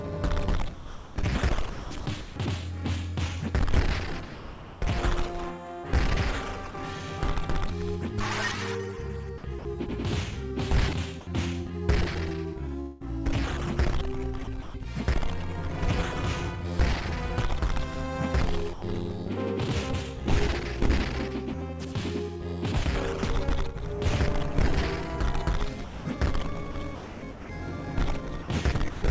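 From 0.74 to 6.74 s the sound is chopped by the voice detector. Pieces keep vanishing and are replaced by a flat, hissy fill, about 1.44 s of it in total. This is likely the sender's detector switching on and off, with comfort noise filling the gaps. The same choppiness returns from 9.38 to 14.74 s, with about 0.53 s replaced. It comes back again from 25.84 to 29.02 s, where about 0.87 s is lost. Throughout, nothing is heard above 8 kHz, which fits a wideband call codec such as G.722.

From 18.73 to 18.82 s a short stretch of sound is dropped by the voice detector. For 90 ms the sound gives way to steady, even noise, then resumes. The detector likely mistook that quiet moment for background and stopped sending, and the receiver played comfort noise in its place.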